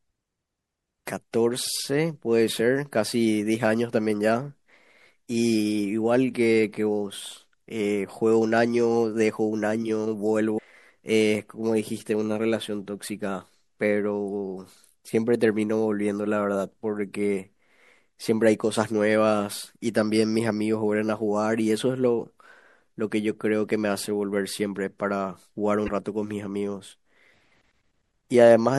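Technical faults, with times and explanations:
Throughout, MP3 compression, likely: the speech sounds watery and swirly, with s sounds turned metallic and smeared. A low bitrate, perhaps around 64 kbps, would force the encoder to cut the treble and drop weak detail. A spectrogram shows a flat ceiling and flickering holes in the upper bands.
10.54 to 10.59 s and 25.86 to 25.89 s, damaged data in a compressed stream: each is a brief glitch of roughly 30 to 50 ms where corrupt bytes made the decoder misread frames and hunt for the next header. The waveform shows a jagged burst or small skip, the spectrogram a broadband smear.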